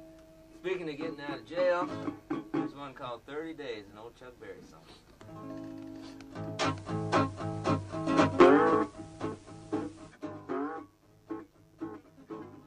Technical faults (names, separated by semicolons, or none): mains buzz; digital radio blending to analogue